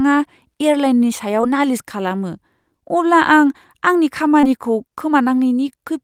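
A speech recording with two short concealed packet losses, at 1.41 to 1.45 s and 4.41 to 4.45 s. Each time about 20 ms of audio arrived too late, and the decoder extended the preceding sound to cover the gap. A spectrogram shows a brief smeared patch of repeated harmonics or flat noise, and the waveform a short stretch of copied cycles.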